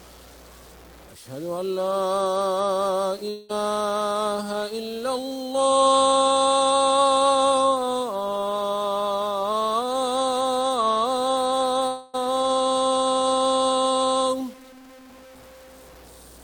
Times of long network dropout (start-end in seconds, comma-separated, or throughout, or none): 3.29-3.51, 11.87-12.15